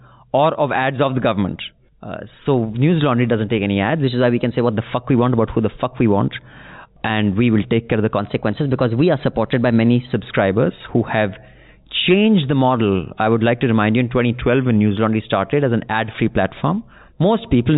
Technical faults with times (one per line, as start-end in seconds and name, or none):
4.04-4.71 drift correction step
8.19-10.14 drift correction step